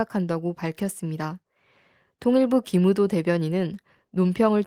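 No technical faults can be heard anywhere in this speech recording.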